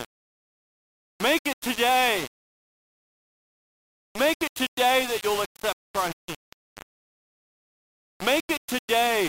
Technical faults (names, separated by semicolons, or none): low bit depth without dither